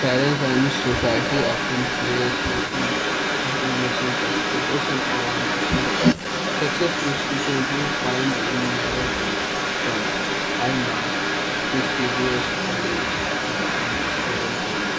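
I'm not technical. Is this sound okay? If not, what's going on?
No, there's an echo leak running through the whole thing, from the start right to the end. The speech comes back about a third of a second later, nearly as loud, most likely from a speakerphone whose echo canceller let it slip through.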